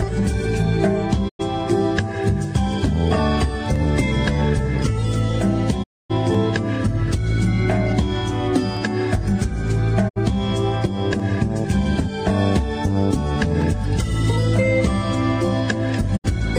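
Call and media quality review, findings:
Digital broadcast dropout, four mutes: 1.28–1.41 s, 5.82–6.12 s, 10.08–10.18 s, 16.16–16.26 s. Each fades out over 20 ms, goes silent for 96, 256, 64 and 64 ms respectively, then resumes further into the programme with the intervening audio gone. Receiver decoder muting on lost or checksum-failed frames. Gap lengths fit whole 32 ms frames, about 2 to 8 per event.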